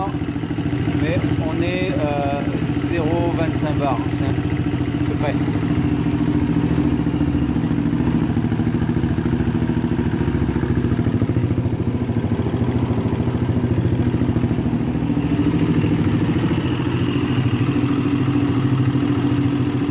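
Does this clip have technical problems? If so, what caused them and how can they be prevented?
Yes. A skip ahead occurs at 4.30 to 4.32 s. Around 0.4 s of audio is gone, and playback jumps forward with no gap: the material on either side is butted together. This happens when a stretch is lost in transit, or when an overflowing jitter buffer throws it away while later audio is already queued. On a waveform the envelope changes shape abruptly at the splice with no silent dip. On a spectrogram the patterns on either side don't connect, and the buffer delay drops by roughly 0.4 s at that point. To prevent it, size the jitter buffer for the network's worst bursts, and let it shrink gradually rather than dropping a block at once.

A jitter buffer speed-up follows from 4.90 to 5.48 s, with playback running at 108% speed. That is above the point where audio starts to sound hurried. The buffer was holding more than its target, so the receiver trimmed short pieces of one or a few pitch periods, many times in a row. 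About 50 ms was removed in total. On a spectrogram, harmonic spacing stays the same, so pitch is unchanged, while events in that span are squeezed closer together in time. On a waveform the periodic cycles repeat with small, repeated shortenings. To prevent it, reduce packet bunching upstream, or allow a gentler catch-up rate.

Throughout the clip, the G.711 A-law call path at 64 kbps leaves nothing above 4 kHz, which shows as an empty band across the top of the spectrogram.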